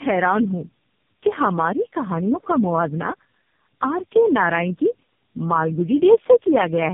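Throughout the speech, tandem speech coding is audible. Nothing reaches above 3.5 kHz, and the sound is rougher, more muffled and more warbly than one narrowband codec alone would leave. That points to three speech codecs in a row, likely GSM, G.729A and AMR-NB, each re-coding the previous one's damage.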